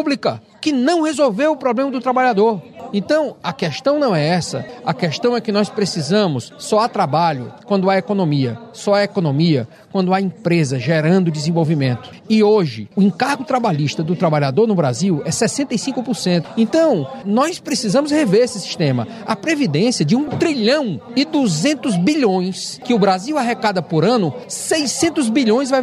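Nothing stood out on listening to this recording.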